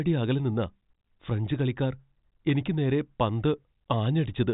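The speech shows no technical faults; it passes through G.726 ADPCM at 40 kbit/s, with the band stopping near 3.8 kHz.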